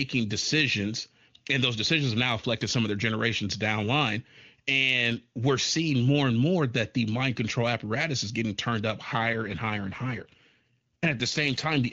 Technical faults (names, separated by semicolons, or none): AMR rate drop